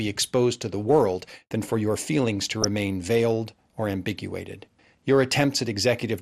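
From the start, the speech sounds dull, with a gurgling, granular edge. Upper frequencies seem switched off and flicker back. This is likely MP2 compression, at a rate that fits around 80 kbps. Too few bits leave coarse, thinned sub-bands.

From 2.62 to 2.68 s, DAB burbling breaks through. A brief burble of noise sits over the speech, lasting about three frames. A small share of bit errors slipped past error correction, so short blips of noise land in single sub-bands.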